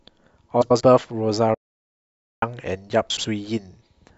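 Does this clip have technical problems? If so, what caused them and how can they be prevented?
Yes. From 0.61 to 0.81 s and again from 3.10 to 3.25 s the speech turns into a garbled flutter. These are frames out of order: two neighbouring blocks, each about 93 ms long in the first case and 70 ms in the second, were swapped and decoded in that order. Reordering packets by sequence number in a jitter buffer before decoding prevents this.

From 1.54 to 2.43 s the speech cuts to silence for about 0.88 s, then resumes. This playback stall was likely caused by the player running out of buffered data or its audio thread being blocked. A larger playback buffer and a real-time audio thread that never waits on slow work would prevent it.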